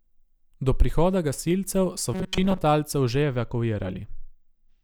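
From 2.14 s to 2.58 s, just after "prihoda gasilcev so", the speech turns into a rigid metallic buzz near 188 Hz that only loosely tracks the words. The likely cause is robotic sound from repeated short buffers: a buffer of about 5.3 ms replayed over most of that span while real audio was skipped.

From 3.22 s to the end, channel delay causes comb filtering. One channel lags by roughly two samples, a few hundredths of a millisecond, and summing to mono cancels content at evenly spaced frequencies. The first notch sits around 10 kHz, dulling and thinning the top end.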